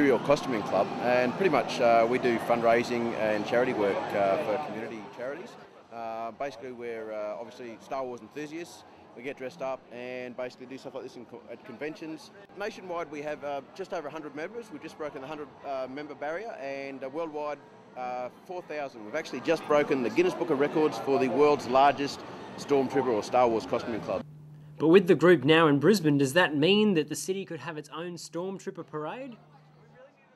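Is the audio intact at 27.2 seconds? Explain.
No. At 27.2 seconds the sound is inside a stretch of zipper noise running from 26.82 to 27.54 s. Across that span the level is pulled down by roughly 10 dB, but the drop is made as a staircase of discrete jumps, around fifty a second, with nothing smoothing between them. Each jump leaves a tiny click in the waveform, so the fade carries a fine, rapid ticking or zipping texture instead of sliding down cleanly.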